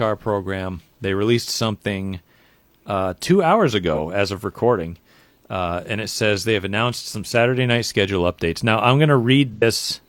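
AAC frame loss with concealment occurs twice. At 3.93 to 3.99 s, after "uh two hours", about 43 ms of audio, consistent with one lost frame, is rebuilt from the previous spectrum and sounds briefly smeared. At 9.53 to 9.63 s, after "I'm going", an 85 ms gap gives a longer phasey blur.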